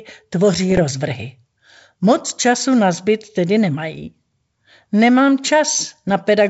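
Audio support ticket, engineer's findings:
Bit errors on an ADPCM link, 0.71 to 0.79 s: pops and a rough burst with brief level jumps. Flipped bits knock the decoder's step size and predictor off track, so damage rings on for milliseconds. Under half a percent error rate, a few frames. G.722 path at 64 kbit/s.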